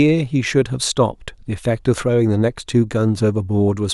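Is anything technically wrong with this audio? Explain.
No, nothing technically wrong stood out on listening to this speech recording.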